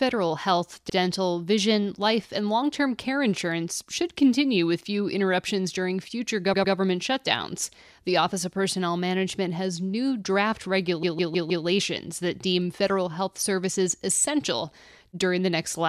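Repeated frames: runs of compressed speech frames were delivered more than once, so the decoder replays the same stretch. At 0.89 s a 52 ms block plays one extra time, a short stutter. At 6.53 to 6.74 s a 104 ms block repeats twice more, and at 11.03 to 11.65 s a 157 ms block loops four extra times, a stutter. Together the repeats add about 0.89 s to the clip.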